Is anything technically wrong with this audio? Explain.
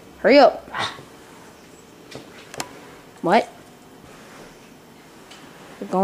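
No, nothing technically wrong can be heard in this audio. There is no fault to point to at any moment in the recording.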